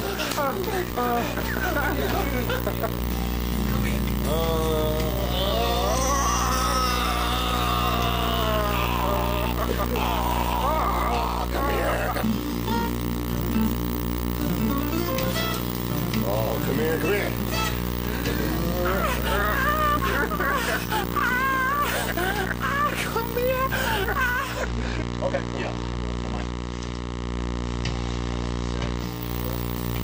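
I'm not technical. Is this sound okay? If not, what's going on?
No. From 24.28 to 29.35 seconds, a digital radio blending to analogue occurs: the radio lost its digital signal and faded over about 0.4 s to the FM broadcast. A faint hiss appears, but unlike a dropout, it never cuts out or changes volume.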